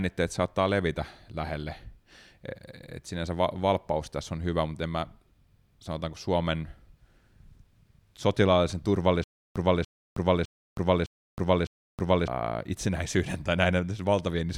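Stutter with silent gaps from 9.24 to 12.28 s: a 0.29 s fragment of speech repeats five times, each followed by 0.32 s of digital silence, a 0.61 s cycle, before "itsenäisyyden tai". A stalled stream likely replayed its last fragment at each retry, losing the audio meant for those seconds.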